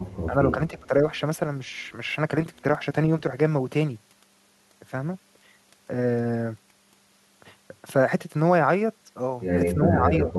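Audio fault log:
0.29–0.34 s, 0.50–1.03 s and 9.75–10.38 s, speech suppressed in double talk: the echo canceller likely mistook overlapping talk for echo and attenuated it, so speech dips by about 10 dB, and about 20 dB in the middle stretch.
10.29–10.33 s, echo leak: an echo canceller likely failed to remove loudspeaker pickup, letting a brief copy return about 287 ms late, roughly 15 dB below the speech.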